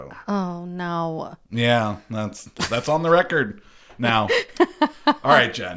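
Nothing stood out on listening to the speech here.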